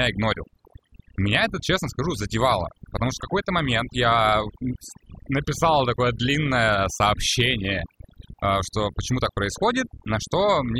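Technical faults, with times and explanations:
Throughout, overdone noise removal: the noise reduction was set too aggressively, so frequency bands near its noise estimate are pulled down or switched off, taking quiet parts of the speech with them. The background drops and breaks up into twinkling, warbling specks.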